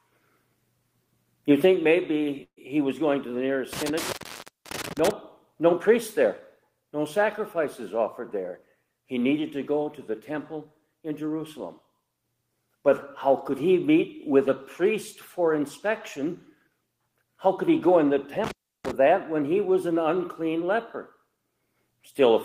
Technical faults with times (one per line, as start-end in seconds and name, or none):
2.43-2.59 burst of packet loss
3.73-5.11 intermittent contact
18.44-18.91 intermittent contact